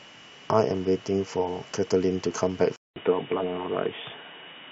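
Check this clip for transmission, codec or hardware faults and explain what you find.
One fault appears. At 2.76 s, after a 200 ms silence, the speech turns dull and boxy through to the end, with nothing above 3.8 kHz. The likely cause is an input switched to a poorer device. A spectrogram shows the upper band cut off sharply, and the waveform shows a flat gap followed by a level shift of about 5 dB.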